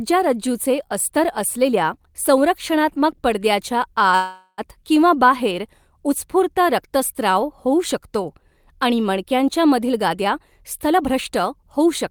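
Packets were likely held up in transit at 4.15 s, just after "अस्तर असलेल्या संरक्षणात्मक पडद्याच्या", so the jitter buffer ran dry and produced a call audio freeze lasting until 4.61 s. The receiver stretched the last bit of sound into a fading buzz or hiss for roughly 425 ms, ending in about 40 ms of silence. When the audio resumes it picks up exactly where it stopped, so nothing is lost, but the rest of the clip now runs about 425 ms later.

From 9.79 s to 11.88 s, after "होऊ शकतो आणि मणक्यांच्या", the jitter buffer was holding more audio than its target, and the receiver drained the surplus by repeatedly cutting out pitch-period-sized slivers. This jitter buffer speed-up removes roughly a fifth of a second in total, so the speech plays at about 110% speed with its pitch unchanged and sounds noticeably hurried until the buffer is back at its normal depth.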